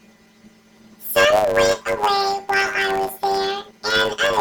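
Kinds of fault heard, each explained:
Planar audio read as interleaved: 10 ms blocks of separate left and right samples are read as alternating pairs, giving speech a robotic 100 Hz buzz throughout, without an octave shift.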